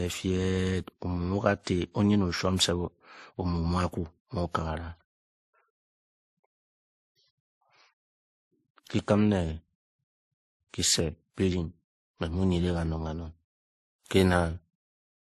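All the way through, the speech has two layers of artefacts at once, with nothing above 14.1 kHz. It's likely transcoding between lossy codecs: a low-rate MP3 around 35 kbit/s re-encoded to WMA near 64 kbit/s, which keeps the MP3's smearing and adds its own.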